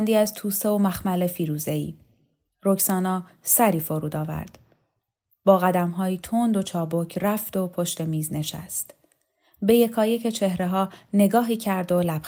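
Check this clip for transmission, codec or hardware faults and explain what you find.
No faults can be heard.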